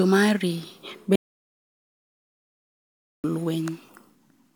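A speech clip with an audio dropout to silence from 1.16 s to 3.24 s. The sound cuts off mid-flow and returns abruptly. About 2.08 s is silent, with no room tone. The input was likely lost while recording continued, writing silence.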